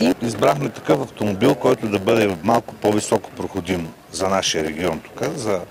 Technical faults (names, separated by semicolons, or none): block size mismatch (padded)